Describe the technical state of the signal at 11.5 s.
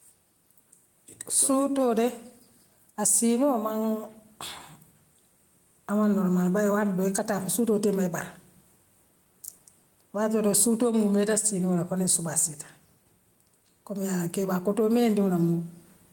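At 11.5 s the speech shows gain pumping, present across the whole clip. Level swings around 5 dB, with room noise about 44 dB below the speech, likely from excessive input gain feeding a fast limiter.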